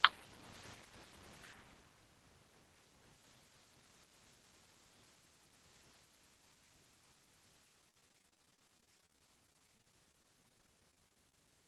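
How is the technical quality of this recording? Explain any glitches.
The last few seconds are where it falls apart: from about 7.81 s to 11.45 s there's repeated packet loss, giving that robotic sound. Over that stretch packets kept going missing or arriving late, dozens of short holes, none longer than about 35 ms. Each time the receiver papered over the hole by stretching the last bit of audio, and then the next hole came along. About a fifth of that span is patched-in sound, so it comes across choppy and robotic, with chunks dropped out. It's all riding on a call path whose top end stops around 12 kHz, which fits an Opus codec.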